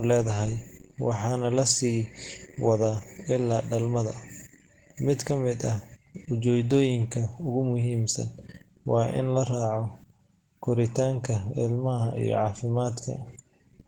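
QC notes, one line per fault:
Throughout, Opus compression: the encoder likely ran in its hybrid mode at a very low rate, with the character pointing to around 16 kbps. The lower band of the speech is carried by a speech-style predictive coder and the upper band by transform coding with folded or noise-filled bands, so the voice comes across hoarse and muffled, with a grainy, rough sheen on the highs. The damage is plainly audible, though full bandwidth survives up to about 20.4 kHz.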